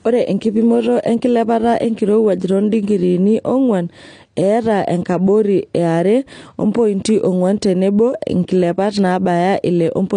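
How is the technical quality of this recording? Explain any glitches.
The recording is limited by lossy compression that is plainly audible throughout the speech. Across the whole clip, AAC compression is the likely cause: nothing is present above 9.8 kHz, and what remains sounds dull, smeared and warbly on sibilants. The coder discarded and coarsely quantised spectral detail to save bits, consistent with a low rate around 32 kbps.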